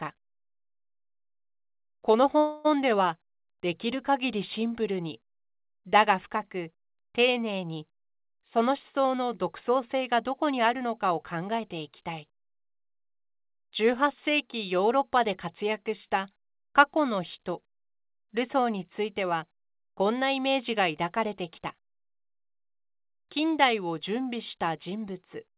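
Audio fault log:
2.38–2.67 s, call audio freeze: the speech stalls for about 265 ms as the last sound carries on and fades. It then resumes exactly where it stopped, with nothing lost. This is likely because delayed packets emptied the jitter buffer, so the receiver stretched that final sound across the wait.
7.90–11.89 s, jitter buffer speed-up: the speech runs 6% fast at unchanged pitch and sounds hurried. The buffer held more audio than its target, so the receiver cut many short pitch-period slices in a row, roughly 0.3 s in total.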